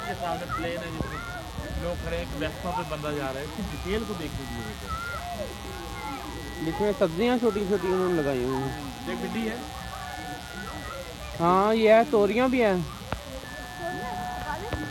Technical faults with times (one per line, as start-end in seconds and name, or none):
0.00-14.91 mains buzz